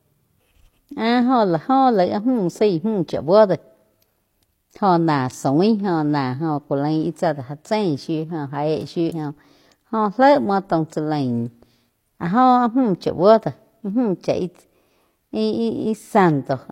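At 9.06 to 9.12 s the speech is broken by damaged data in a compressed stream: a short stretch of the encoded data is corrupt, so the decoder misreads those frames, loses sync and hunts for the next valid frame header. It is a brief disturbance of about 60 ms.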